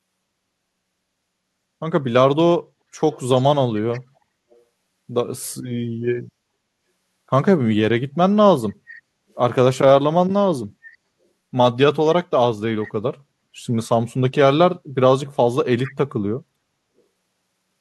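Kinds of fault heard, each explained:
Echo leak: faint, brief scraps of the speech return 432 ms late, likely from a loudspeaker whose echo canceller let part of the pickup through.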